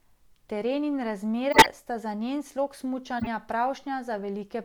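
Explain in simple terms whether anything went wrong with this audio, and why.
Corrupt frame decoded: damaged chunks of compressed speech were played anyway, causing brief squeaks or noise bursts at 0.46–0.49 s (faint), 1.52–1.66 s (loud, just before "sta za njen slog"), and 3.19–3.27 s (right after it).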